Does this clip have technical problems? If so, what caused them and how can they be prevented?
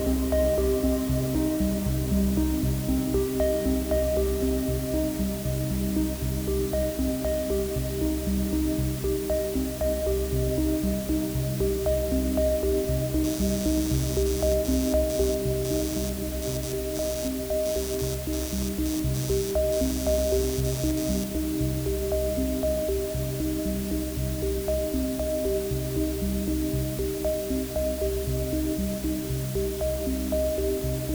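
Yes, two things stand out.

First, there's low bit depth with dither running through the whole clip: a steady, even hiss that sits only around 15 dB below the sound itself, with no gritty distortion on top. That's what you get when the audio is rounded to very few levels, which here fits something like 5 bits, with dither added first so the rounding error turns into flat white noise instead of crunch. To prevent it, record and export at 16 or 24 bits, and only drop bit depth at the very end if you really have to.

Second, from 13.24 to 21.24 s there's computer activity noise, a buzzy, chirpy layer pulsing at roughly a hundred times a second and, again, about 15 dB under the sound. It comes and goes with what the computer is doing, not with the audio. Processor, graphics or mouse load shifts the ground the audio circuit shares, and that leaks straight into the signal. To prevent it, use an external USB or balanced interface, or a ground-loop isolator, rather than the onboard input.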